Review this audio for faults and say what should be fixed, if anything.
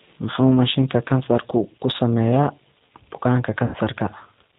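G.729 codec damage runs through the whole speech clip: nothing above 4 kHz survives, and the 8 kbit/s pulse-based rebuild leaves the voice audibly rough and synthetic. Carry the call on a wideband codec at a higher bitrate.

VoIP packet loss concealed by the speech codec occurs from 3.65 to 3.76 s. About 90 ms of audio, consistent with nine 10 ms frames, is extrapolated from the last pitch and filter and fades out, and the speech stays weak briefly afterward. Add jitter buffering and forward error correction, or fix the lossy network path.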